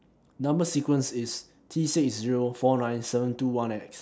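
Speech, with no audible technical faults anywhere.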